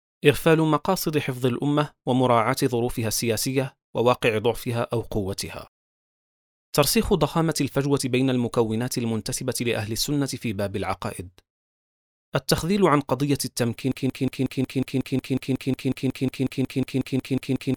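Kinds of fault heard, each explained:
Broken-record loop: from 13.9 s to the end, one 0.18 s fragment repeats exactly, back to back, about 21 times, with a stuttering mechanical pulse. Likely the player or stream stalled and kept resending its last held piece, so the intended audio is lost.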